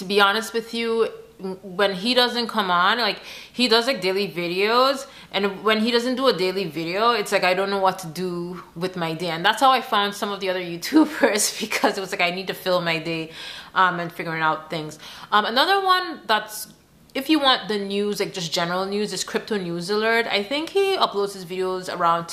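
No technical faults can be heard at any point in the audio.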